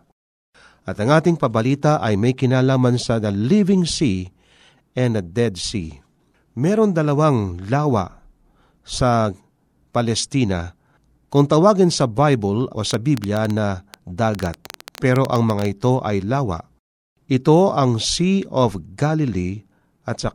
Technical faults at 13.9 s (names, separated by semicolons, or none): train of clicks